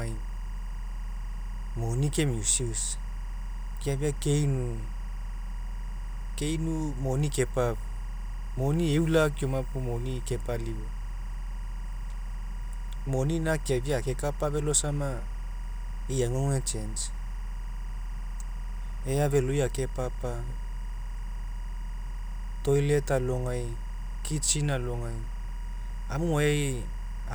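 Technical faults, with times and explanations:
Throughout, timecode bleed: linear timecode from a neighbouring track or cable leaks in, roughly 25 dB below the speech, as a chirping warble switching near 1 and 2 kHz. This repeats at the rate of 23.976 fps code, drawing steady horizontal bands on a spectrogram.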